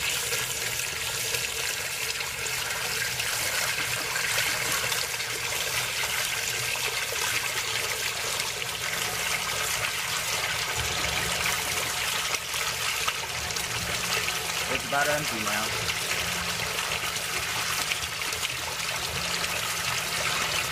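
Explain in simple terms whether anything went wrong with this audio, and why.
Nothing went wrong with this audio, so there is nothing here that needs explaining.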